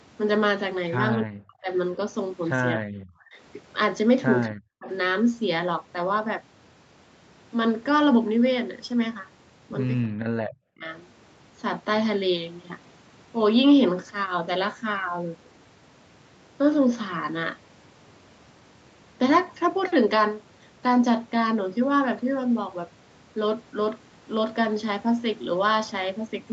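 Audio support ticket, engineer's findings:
Speech suppressed in double talk: talker's level collapses by roughly 40 dB in short stretches at 1.21–1.69 s, 2.75–3.35 s, 4.48–4.89 s and 10.06–10.84 s, each roughly 0.4 to 0.7 s affected. Likely component: echo canceller's suppressor during double talk. It cannot separate near-end speech from loudspeaker echo, so it attenuates both. The speech band tops out near 8 kHz, consistent with the Opus call path.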